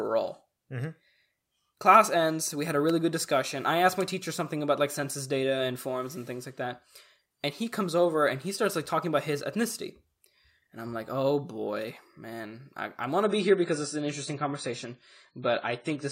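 Speech, with an adaptive stream at a lower bitrate from 13.24 s to the end at 16.12 s. The quality drops suddenly, with no gap in the sound. The treble disappears above 10 kHz, so the speech turns dull. Codec artefacts grow more noticeable. The player switched to a lower-quality rendition when the connection slowed. The change points to a step from around 96 kbit/s AAC down to roughly 24 kbit/s.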